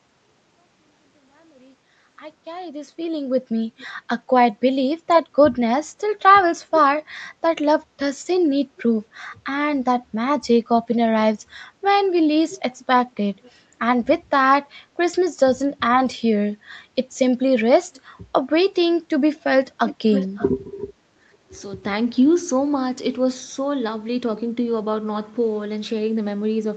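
Echo leak appears at 3.78 to 3.87 s, 12.49 to 13.51 s and 19.41 to 20.51 s: a delayed copy of the speech, trailing by 434 ms in the first two and 546 ms in the third. It is likely loudspeaker pickup the far end's echo canceller failed to remove. The copy starts very quiet and grows louder each time, reaching only about 10 dB below the speech at the last.

Speech suppressed in double talk follows at 21.14 to 21.53 s. The talker's level dips in pieces by up to roughly 30 dB, about a fifth of a second in total. This is likely an echo canceller mistaking overlapping speech for echo and turning it down.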